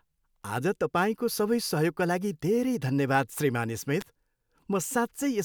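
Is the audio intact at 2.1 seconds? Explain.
Yes, the speech at 2.1 seconds is intact, with no dropout, click, distortion or other audible fault at that moment.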